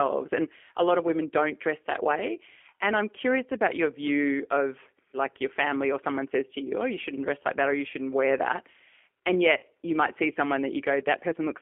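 G.729 codec damage runs throughout this speech recording. The G.729A coder rebuilds each 10 ms frame from a vocal tract filter, a pitch predictor and a handful of pulses at 8 kbit/s. The result is plainly audible: the voice is narrowed to a telephone band of roughly 250 Hz to 3.4 kHz, with nothing bright above that, and has a rough, slightly synthetic texture. VoIP packet loss concealed by the speech codec occurs from 9.57 to 9.63 s, just before "you might see someone". About 40 ms of audio went missing, which fits two lost packets. The decoder filled the gap by repeating its last pitch and filter settings at falling gain, so the sound smears into a buzzy tone or coloured noise that fades. Because each frame depends on the one before, the voice stays weak or distorted for a moment after the stream resumes.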